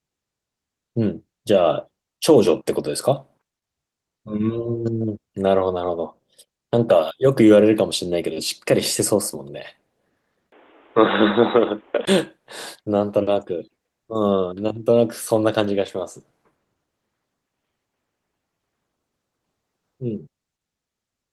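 Input switched to a poorer device, 10.50 to 12.07 s: a 20 ms gap, then boxy speech cut above 3.8 kHz with faint new background noise, likely another microphone.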